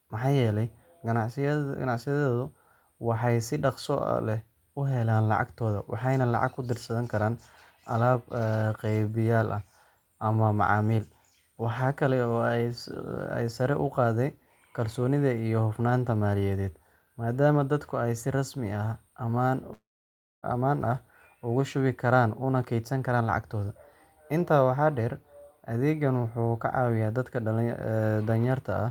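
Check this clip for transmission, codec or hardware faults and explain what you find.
One fault appears: a long network dropout from 19.73 to 20.45 s. The speech breaks off into a brief buzz- or hiss-like continuation of the last sound that fades within a fraction of a second, leaving about 0.61 s of silence before the audio resumes, with roughly 0.7 s of speech gone for good. This is likely a stretch of lost packets, where the receiver extends the final sound and then mutes until new audio arrives.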